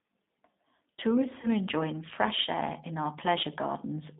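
The clip is speech carried through a G.729 codec. The band runs only from about 200 Hz to 3.7 kHz, and the sound is plainly rough and synthetic, which fits an 8 kbit/s model-based coder rebuilding speech from a filter, pitch and sparse pulses. Packet loss concealed by the speech codec occurs from 1.41 to 1.47 s, just before "enjoying fresh air in". About 20 ms of audio went missing. The decoder stretched its last sound into a fading buzzy tone or coloured noise, and the sound stays weak briefly afterwards.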